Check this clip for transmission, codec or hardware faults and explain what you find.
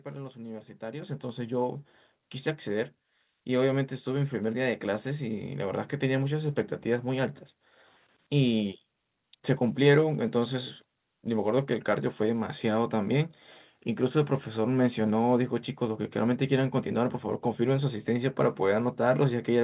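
One hardware-level fault is present, heard over a narrowband call path that carries nothing above 4 kHz. At 1.02 s, a microphone volume step-up occurs: the call software raised the device's input gain in a single jump of about 9 dB, so speech and background noise suddenly become louder together.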